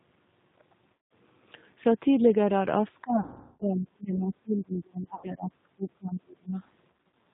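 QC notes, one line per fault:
throughout: G.729 codec. The whole clip has that squeezed, slightly rough and synthetic speech quality, with nothing above 4 kHz, which fits an 8 kbit/s G.729-type codec. The coder rebuilds each 10 ms frame from a vocal tract filter, a pitch predictor and a handful of pulses rather than the actual waveform, so the speech stays intelligible but loses its natural grain.
0.93–1.11 s, 3.20–3.64 s, 5.15–5.30 s, 6.93–7.12 s: VoIP packet loss concealed by the speech codec. Each gap gets filled by the decoder stretching its last pitch and filter into a buzzy, fading tone. The 3.20 s one is the worst, around 400 ms lost. The last one is choppier, with short dropouts of up to 40 ms scattered over 200 ms. After each gap, the speech takes a moment to sound right again, since every frame builds on the one before.
3.02–6.57 s: speech suppressed in double talk. Across roughly three seconds the talker's level keeps dipping and thinning, at worst by around 30 dB, so parts of the speech nearly vanish. 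The likely cause is that the far end was talking at the same time, and the echo canceller couldn't tell the local speech from loudspeaker echo, so it turned everything down together.
4.76–4.81 s: other side's voice leaking through. A very faint, brief scrap of a second voice slips in, about 50 ms long and far below the main talker. It's likely far-end audio from the loudspeaker that the echo canceller didn't fully remove from the mic.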